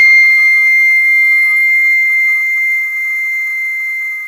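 From start to finish, the treble of this music sounds bright but synthetic, with a gritty, metallic sheen that is plainly audible, and nothing reaches above 15.5 kHz. The likely cause is HE-AAC compression, in its v2 form, at a low bitrate that fits roughly 24 kbps. The codec keeps only the lower spectrum and fakes the top by copying lower bands upward under a coarse envelope, so the upper harmonics no longer line up with the real ones.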